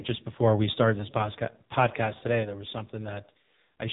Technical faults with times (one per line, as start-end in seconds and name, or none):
0.00-3.92 AMR narrowband mobile codec